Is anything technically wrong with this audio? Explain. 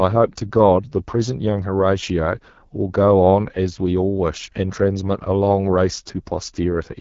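Yes. Throughout the speech, the AMR wideband (HD Voice) codec is plainly audible. Its raspy, rough texture points to one of the lowest rates, around 9 kbit/s. The codec models speech below 6.4 kHz as pulse-excited vocal tract resonances and fills the band above with shaped noise. On a spectrogram, harmonics become smeared, the upper band looks like featureless noise, and everything stops at about 7.3 kHz.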